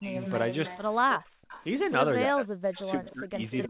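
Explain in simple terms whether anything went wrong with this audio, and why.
Speech suppressed in double talk at 0 to 0.17 s and again from 2.28 s to the end: the voice sinks sharply, likely because both sides talked and the echo canceller turned everything down.

Echo leak at 0.21 to 0.79 s, 1.14 to 1.65 s and 2.77 s to the end: a fainter copy of the voice trails 305 ms behind. It is loudest in the final stretch, likely loudspeaker sound the other side's echo canceller failed to remove.

Background gated by the echo canceller at 1.2 to 1.48 s: the room sound drops out almost completely for about 0.3 s while the loudspeaker plays, then comes back.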